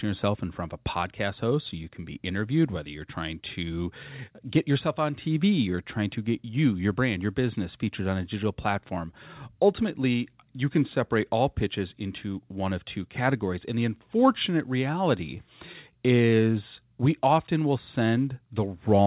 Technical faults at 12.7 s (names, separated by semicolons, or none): none